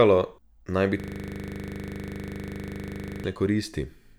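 After "naj bi", from 1.00 to 3.24 s, a system hang loop makes the frozen driver's buffer replay one 40 ms slice at 25 Hz. The result is an exact, rasping buzz, not a dropout's silence.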